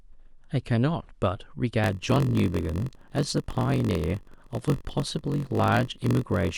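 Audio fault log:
1.82–6.58 s, block size mismatch (padded): a steady buzz near 46.9 Hz runs to the end. Each block carries a short silent gap where zeros fill the unwritten tail. The speech slows to 0.938 times normal at about normal pitch, which fits 1024-sample reads.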